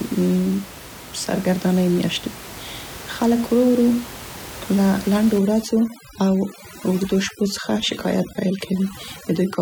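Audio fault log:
5.38–9.61 s, overdone noise removal: a noise reduction stage set too strong cuts each frequency band near its noise estimate, so room noise about 16 dB below the speech drops and breaks up into twinkling specks, and quiet speech detail goes too.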